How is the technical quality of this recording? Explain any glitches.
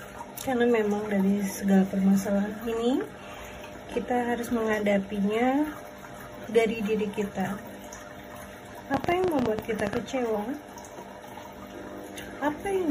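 The recording has one clear fault, a train of clicks late in the clip. From 8.94 to 9.98 s, around fifteen short, similar clicks arrive at about 13.7 per second, spaced unevenly. They peak well above the surrounding sound, around 15 dB louder, so they cut through as a rapid, stuttering tick-pop. Similar pulses arriving in an irregular burst like this most likely come from electrical interference from nearby equipment or a faulty connection or power supply.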